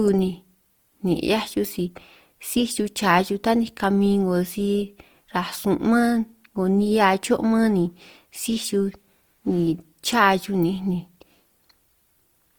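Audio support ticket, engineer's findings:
Opus compression, throughout. Speech grainy, rough, noisy on sustained tones; little swirl. Likely cause: Opus music (CELT) mode at low rate, fitting about 24 kbps. Starved bands filled by folded copies or noise. Spectrogram: full band to 20.4 kHz, few holes, smeared grainy texture in upper bands.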